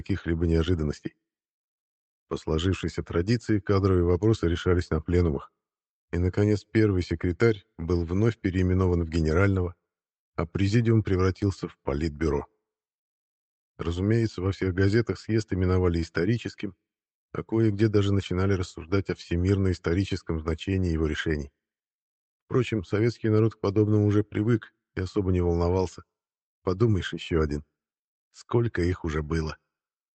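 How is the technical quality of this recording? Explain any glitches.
No glitches to report; the audio holds steady throughout, with the top end stopping at about 8 kHz, as expected from an Opus call path running at a modest bitrate.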